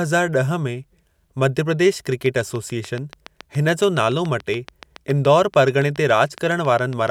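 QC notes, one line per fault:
2.12–7.09 s, train of clicks: right after "ॾह में मध्य प्रदेश", a steady ticking of around forty near-identical clicks at 7.06 per second runs over the speech and its pauses, peaking about 5 dB above it. Likely cause is interference from nearby equipment or a faulty connection or power supply.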